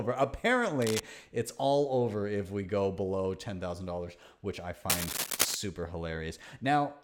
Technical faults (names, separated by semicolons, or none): cable scratch noise